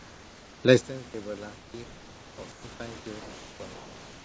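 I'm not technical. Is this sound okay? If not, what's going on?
No. Three things are going wrong, and each points to how the call was carried.

Comfort noise in place of the background: from the start to 0.64 s, and again at 1.56 to 1.74 s, 2.52 to 2.64 s and 3.20 to 3.60 s, the natural room sound is replaced by a smooth, featureless hiss that is a little quieter than the real background. This is likely the sending side pausing transmission whenever it judged nobody was talking, with the receiving side filling each gap with generated noise.

Onset clipped by the voice detector: at 1.72 s the sound returns abruptly, with its soft beginning missing. The sender's voice detector likely reacted a fraction of a second late, so the opening instant was never sent, and the generated filler noise ran right up to the point where real audio resumed.

One channel inverted: from 0.81 s to the end, the voice drops far down, as if most of it had been removed. 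The likely cause is that one of the two stereo channels is flipped upside down. When the two channels are combined into one, the parts they share cancel each other out, and the centred voice is mostly lost.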